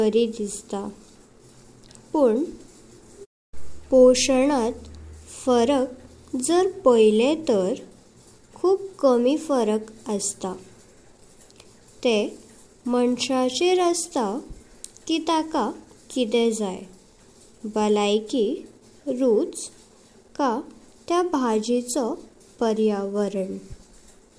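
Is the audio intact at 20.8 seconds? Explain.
Yes, the speech at 20.8 seconds is intact, with no audible dropout, click, distortion or other fault at that moment.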